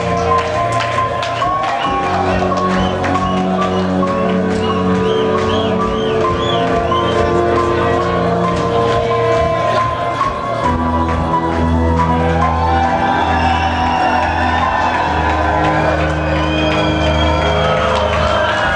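No technical faults can be heard anywhere in the clip.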